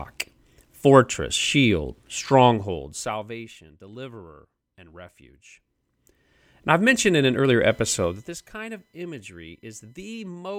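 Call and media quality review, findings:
Zipper noise, 2.50–3.52 s, after "fortress shield", before "deliverer and". Level drops about 20 dB in unsmoothed steps, roughly 50 per second, each step a small click. Audible as ticking riding on the speech. Probable component: gain stage updating once per 20 ms block, which fits a per-buffer volume update without ramping.

Zipper noise, 8.02–8.41 s, after "mentioned in an earlier". 1 dB steps, about 15 dB total fall, again near 50 steps per second. Same stepped gain path, no interpolation between updates.

USB whine, 7.70–10.28 s, starting after "mentioned in an earlier". Fixed-pitch tone on a 1 kHz fundamental, strongest at 2 kHz, about 35 dB below the speech. Probable component: USB audio interface or its power and ground. 1 ms bus frame activity is leaking into the analogue path.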